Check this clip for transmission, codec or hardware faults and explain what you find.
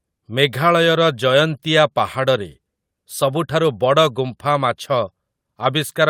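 Nothing in the speech stood out as a transmission, codec or hardware problem on listening.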